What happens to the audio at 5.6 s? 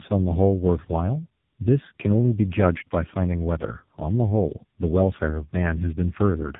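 At 5.6 s the speech sounds rough, muffled and warbly, with nothing above about 3.8 kHz. This is tandem speech coding, present for the whole clip rather than just this moment. The sound appears to have passed through two low-bitrate speech codecs in a row, which fits a G.723.1 stage followed by AMR-NB, with a plain telephone-band link between them. The second coder had to re-encode the first one's already damaged output, so their errors stack.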